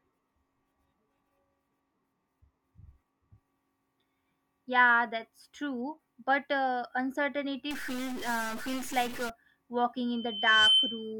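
Speech with two faults. From 7.71 to 9.30 s a harsh, buzzy distortion rides on the sound and fills the pauses with noise, with errors of about -35 dBFS. That is likely a stuck bit, which, unlike clipping, also corrupts the quiet gaps rather than only the peaks. From 10.10 to 11.13 s a loudspeaker feedback squeal at 3.1 kHz swells over about half a second to about 10 dB above the speech. Its self-building rise sets it apart from a steady interfering tone.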